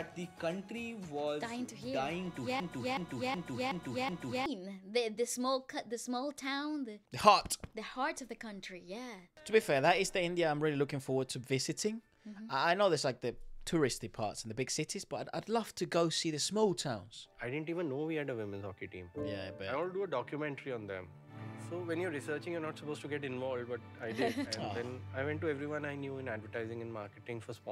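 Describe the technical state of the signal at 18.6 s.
At 18.6 s the signal is intact, with no dropout, distortion, glitch or other fault to be heard at that moment.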